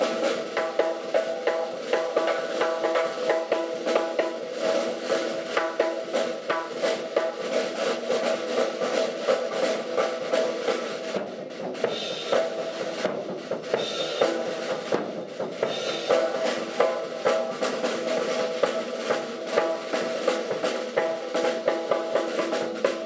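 No technical faults can be heard anywhere in the recording. Nothing interrupts or disturbs the signal at any point.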